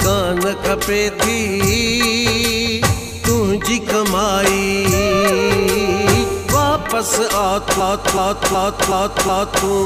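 From 7.80 to 9.66 s, a system hang loop: playback froze and cycled one 0.37 s buffer five times, a 2.7 Hz stutter shown as identical repeating waveform blocks.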